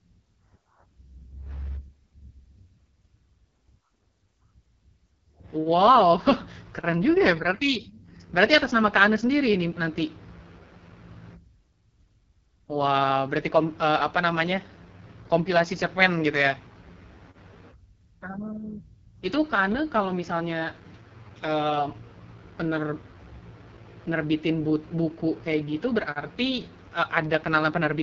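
From start to finish the speech carries the heavy damage of the AMR wideband (HD Voice) codec, running at a rate whose raspy texture fits its lowest 6.6 kbit/s mode. The codec rebuilds the voice from a pulse-excited vocal tract model up to 6.4 kHz and pads the band above with shaped noise. Voiced sounds turn rough and buzzy, and nothing is present above 7.5 kHz.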